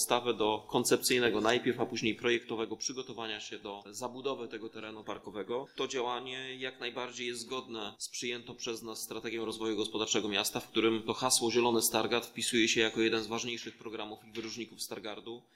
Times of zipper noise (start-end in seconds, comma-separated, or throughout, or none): 2.18-2.79, 9.33-10.17